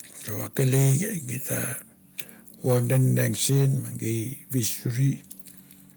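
From 0.58 to 0.94 s, and again from 2.67 to 3.66 s, the loudest speech peaks turn harsh and crackly, with flattened tops roughly 8 dB and then 6 dB over full scale, affecting around a tenth and then a twentieth of the samples. This is likely microphone overload: input gain too high for the converter. Unlike limiter pumping or codec smearing, the grit appears only on the peaks, as abrupt distortion rather than level dips.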